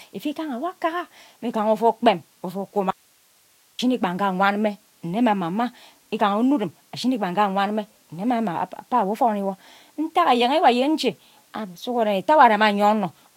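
A speech recording with an audio dropout to a faint residue from 2.91 to 3.79 s. The speech cuts out abruptly for about 0.88 s, leaving only hiss roughly 40 dB down, likely from a signal break upstream while the later path stayed live. On a waveform it shows as a sudden flat band; a spectrogram shows a sharp-edged gap filled with broadband noise.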